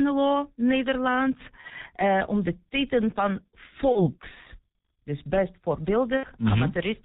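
Throughout, the speech carries the sound of the G.723.1 codec at heavy damage, which fits its 6.3 kbit/s mode. Content above 4 kHz is missing, so the voice is muffled. The coarse 30 ms frames and the slowly updated vocal-tract model leave the tone hoarse and smear consonant onsets and transitions. Rapid articulation loses definition because the coder cannot follow it within a frame.

At 1.61 to 1.67 s there is VoIP packet loss concealed by the speech codec. The gap fits one lost 30 ms frame. The decoder repeats its last pitch and filter at falling gain, so a short stretch of extrapolated sound replaces the missing speech. The same thing happens from 3.93 to 4.12 s, right after "titel van". The gap is again about one frame, but the weakened, distorted sound lasts nearly 0.2 s while the decoder's state recovers. At 6.17 to 6.27 s, after "dus best", the gap fits two frames, or 60 ms. The extrapolated sound fades further before normal decoding resumes.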